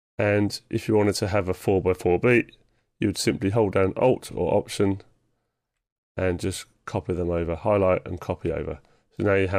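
A gain stage is pushing the signal about 1 dB past what the converter or number format can hold, so the peaks are sliced flat. The first hard clipping runs from 2.26 to 2.38 s and the second from 4.04 to 4.08 s. With so small an overload, the flattened tops add only a short burst of high harmonics. Each is heard as a brief crackle riding on the loudest moment rather than a sustained fuzz.

At 4.31 to 4.33 s, a 24 ms block of compressed audio was delivered to the decoder twice, which points to a single frame being duplicated. These repeated frames replay that sliver of sound back to back, giving a tiny stutter. The clip is lengthened by the same 24 ms.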